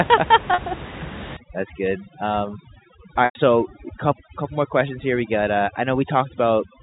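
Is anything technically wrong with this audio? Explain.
Yes, two kinds of fault can be heard.

Packet loss with pitch repetition occurs twice, at 0.54 to 0.58 s and at 3.25 to 3.35 s. When audio packets fail to arrive, the receiver fills the gap by replaying the most recent pitch cycle and fading it down over roughly 50 ms. The first gap is 40 ms, short enough that it comes across as a brief held, buzzy tone. The second lasts 100 ms, longer than the fade, so the repeated cycle dies away into silence before the speech returns through a short cross-fade. That gap length fits a loss of about ten 10 ms packets.

Overdone noise removal runs from 1.37 s to the end of the clip. The room noise sits about 14 dB below the speech, and a noise suppressor set too aggressively treats any frequency band whose level comes close to its noise estimate as noise, pulling that band far down or switching it off entirely. 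Quiet parts of the voice fall near that threshold and get removed along with the noise. As a result, the background collapses into near silence scattered with twinkling specks.

The band limit of the G.711 telephone coding is also audible, with nothing passing above 4 kHz.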